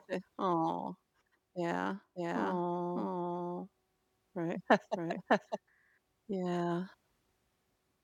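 From about 2.16 s to 5.58 s the speech picks up a doubled audio track: a second, full-band copy of the same sound trailing roughly 0.7 s behind, at about the same level as the original. It's a dry copy with no decay or room colour, so it's more of a confusing overlap than an echo, and it snaps in and out abruptly at both ends. The likely cause is a slower second capture path or an edit that left two misaligned copies.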